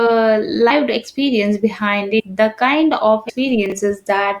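At 0.70 s the speech lurches forward with a soft, smeared blip rather than a click, and the same happens at 2.18 to 2.20 s and again at 3.28 s, each jump larger. These are compressed frames skipped: whole frames of the encoded stream were missing or rejected by the decoder, so playback resumes further on. The gaps of roughly 70, 100 and 150 ms suggest about three, four and seven frames of 26.1 ms each, and the overlap between neighbouring frames blurs each join.

From 3.66 to 3.72 s there is a brief jumbled flicker. This is chunks out of order: a 20 ms chunk of audio played two chunks later than it should have, after material that belongs behind it. No audio is lost, but the wrong sequence creates three abrupt joins inside that short stretch, which produces the garbled effect.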